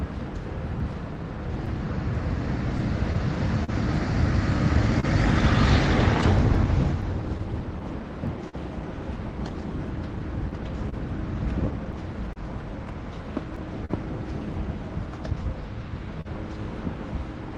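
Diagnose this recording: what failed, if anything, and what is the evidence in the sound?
Clock drift between sender and receiver, at the buffer stage: the sender's clock runs roughly 3 percent slow, so the jitter buffer keeps draining, causing uneven little stretches and stumbles throughout.

Scattered short gaps, on the network side: roughly twenty brief holes from 0.79 to 16.27 s, longest around 40 ms, each patched by extending the previous sound into small smears and ticks.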